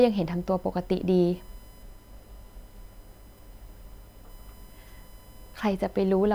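Throughout the speech runs a USB whine, a steady 1 kHz tone with harmonics that peak near 23 kHz, roughly 35 dB below the speech. Current drawn in 1 ms bus frames leaks into the audio through the power or ground, leaving unbroken horizontal lines across the spectrogram.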